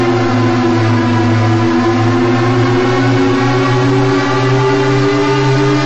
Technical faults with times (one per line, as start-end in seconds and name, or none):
0.00-5.85 wrong sample rate